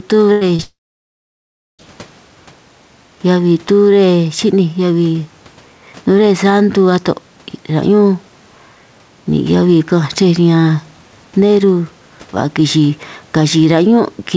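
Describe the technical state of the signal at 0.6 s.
At 0.6 s the sound smears briefly, as if the last instant were stretched and wobbling, from 0.56 to 0.62 s. This is short concealed packet loss. About 30 ms of audio never reached the decoder in time, and the receiver patched the gap by extending the preceding sound (its pitch if voiced, shaped noise if not) before crossfading onward. Any brief consonant there may be lost.

From 0.62 s the patch does not rejoin real audio. A fading synthetic buzz or hiss carries on, then gives way to silence lasting about 1.05 s, and the sound resumes at 1.82 s with roughly 1.17 s of the original missing. This is a long network dropout, likely caused by an extended stall in which no packets arrived, so the receiver's concealment ran out and it muted the output.

Across the same moment the gain swings by a few decibels as loud sounds come and go, giving a squashed quality. 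This is gain pumping, likely from input gain set too high with a fast limiter or compressor clamping it down on every peak, which pushes soft and loud parts closer together. The room noise sits well beneath the speech, and the G.722 call path keeps everything below 8 kHz.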